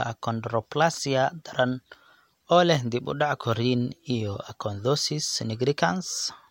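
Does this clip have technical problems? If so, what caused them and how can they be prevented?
No, the speech signal in this recording shows no technical faults that call for a cause or a preventive step.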